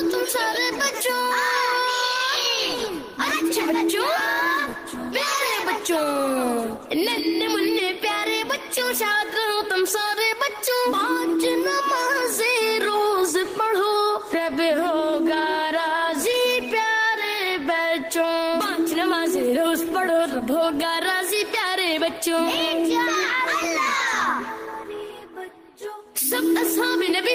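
At 16.31 to 16.35 s, a short concealed packet loss: about 20 ms of the stream arrived too late for the decoder, which patched the gap by extending the preceding sound for roughly 18 ms before blending back. The result is a brief smear or wobble.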